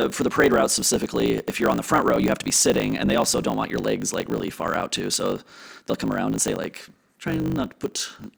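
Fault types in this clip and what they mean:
block size mismatch (truncated): one stage writes longer blocks than the next reads, so each block's tail is discarded, which fits 1024-sample blocks being cut short. The speech carries a 50 Hz buzz and runs 1.16 times too fast at near-normal pitch.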